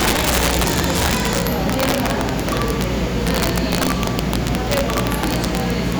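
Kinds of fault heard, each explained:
Integer overflow: the signal is driven about 5 dB past the integer limit, and instead of being held there the loudest peaks wrap to the opposite sign, producing harsh cracks sharper than clipping on roughly one percent of samples throughout.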